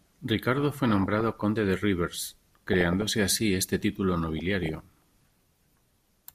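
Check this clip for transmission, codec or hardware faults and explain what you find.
Three bursts of DAB burbling affect the speech, at 0.73 to 1.42 s, 2.55 to 3.10 s, and 4.22 to 4.82 s. Weak reception lets bit errors corrupt MP2 sub-band samples and scale factors, causing short blips of noise and sudden jumps in sub-band level.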